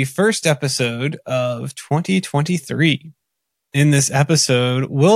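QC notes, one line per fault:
Nothing stood out on listening to this speech clip.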